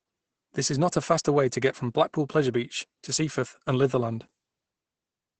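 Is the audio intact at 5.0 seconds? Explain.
No. At 5.0 seconds, as throughout the clip, the speech carries Opus voice compression damage. The encoder is running its SILK linear-prediction coder in wideband mode, and the sound points to a starved bitrate around 12 kbps, so the excitation is coded coarsely and the band is cut, with nothing above 8.8 kHz. The result is plainly audible: the speech sounds muffled and hoarse, with a slightly robotic edge.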